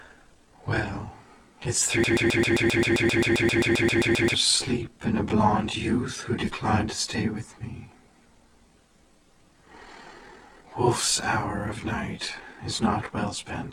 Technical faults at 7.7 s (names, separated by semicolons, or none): none